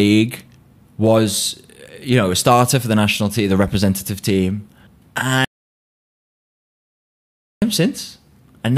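The input feeding the recorder most likely dropped out, whether through a disconnected device, a broken link or an accidental mute, while the recording carried on writing silence. The result is an audio dropout to silence from 5.45 s to 7.62 s: the speech stops abruptly mid-flow and the background vanishes with it, leaving about 2.2 s of dead digital silence with no room tone, before the speech cuts back in just as suddenly. Whatever was said during the gap is lost.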